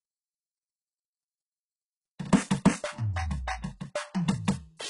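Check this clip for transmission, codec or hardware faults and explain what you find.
Two codec faults are present in this music: heavy compression damage throughout, and one pre-echo.

HE-AAC compression, throughout: The heavy damage likely comes from an HE-AAC encoder working at a very low rate, consistent with roughly 12 kbps. The encoder codes only the lower spectrum and synthesises the treble by copying lower bands upward under a coarse envelope. That rebuilt treble is not the original, so its harmonics fail to line up with those below the crossover, and nothing survives above 11.1 kHz.

Pre-echo, at 2.18 s: The transform codec spreads quantisation noise evenly across each block. A sharp attack here lands late in its block, so noise sized for the loud onset also fills the quiet moment just before it. The result is a burst of hiss about 10 ms ahead of the attack, which makes the onset sound soft and smeared rather than crisp.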